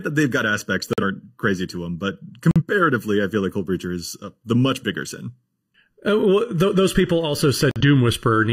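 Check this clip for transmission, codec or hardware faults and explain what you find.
Two faults affect this speech clip: a constant comb-filtering colour and three brief dropouts.

Channel delay (comb filtering) runs throughout. One channel arrives just under a millisecond late, and the mono sum cancels at evenly spaced frequencies from around 700 Hz, making the speech hollow and phasey.

Corrupt frame muted occurs at 0.93–1.03 s after "that they've got aspects", at 2.51–2.62 s after "crazy to them but", and at 7.71–7.81 s. The decoder rejected a damaged compressed frame and silence replaced it, leaving an abrupt hole of about a tenth of a second that fits one lost frame.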